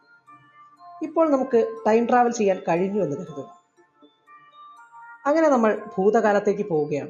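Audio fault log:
Throughout: noise suppressor applied to music or sounds. A speech-tuned noise suppressor stayed active on material that isn't speech, and it keeps deciding that steady, sustained parts of the sound are background noise. Its gain swings by about 15 dB as it clamps down and releases. Onsets and sharp attacks slip through, while held tones, ambience and reverberant tails get pulled down. The level pumps and flutters, and the sound turns thin and dry in the sustained stretches.
0.00–0.84 s and 3.46–4.58 s: sound cut by the noise suppressor. In these two stretches the suppressor classified the sound itself as noise and attenuated it harder than elsewhere, with the deepest drop reaching about 21 dB. Each stretch is affected for roughly a second. The sustained and decaying parts sink sharply and their tails are chopped short, so the audio seems to duck away and hollow out, while any sudden transients within these spans still poke through.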